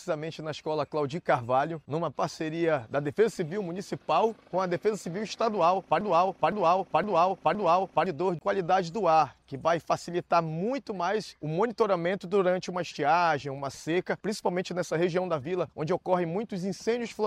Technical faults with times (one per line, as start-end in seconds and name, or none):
6.01-8.06 broken-record loop